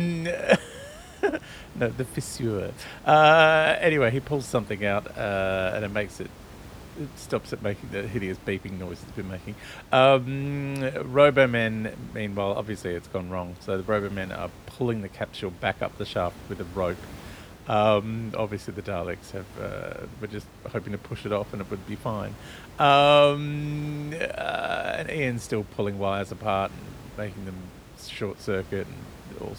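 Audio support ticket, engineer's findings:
Nothing stood out on listening to the speech, with only the room's own background noise sitting about 20 dB beneath it.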